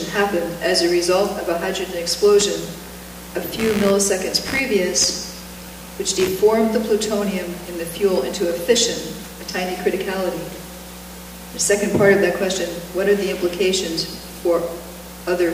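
From 2.40 s to 6.28 s a buzzing, chirping noise sits under the audio. It pulses at around 70 times per second and runs roughly 15 dB below the sound itself. This is computer activity noise. Bursts of processor, graphics or mouse activity shift the ground that the audio circuit shares with the computer. The noise follows that machine activity, not the sound, so it starts and stops on its own.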